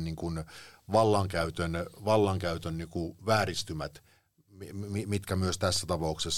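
Four regular ticks, each a brief dropout of no more than a couple of milliseconds, run from 4.94 to 5.76 s: CD scratch ticks, where a scratch corrupted data beyond error correction on each disc revolution.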